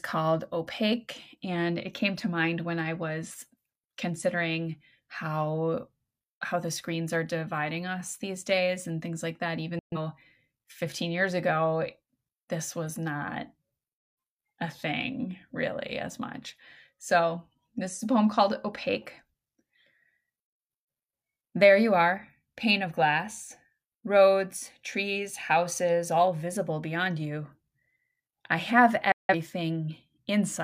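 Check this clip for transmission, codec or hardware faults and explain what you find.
Two digital broadcast dropouts appear in this speech clip. At 9.79 s and again at 29.12 s, the receiver stopped getting usable frames, either from lost signal or failed checksums, and muted until good data returned. Each gap opens with a fast fade of about 3 ms, so the speech simply vanishes instead of clicking. The holes last 0.13 s and 0.17 s, consistent with three and four frames of roughly 43 ms each. Whatever was broadcast in those gaps is gone.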